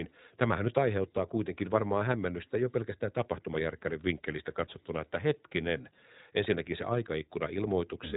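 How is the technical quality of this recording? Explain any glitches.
Quality is limited by one problem that runs the whole way through. It's iLBC codec damage: nothing above 3.8 kHz, and each short frame is coded on its own, which fits 20 ms frames at 15.2 kbps, so the speech sounds plainly rough and synthetic.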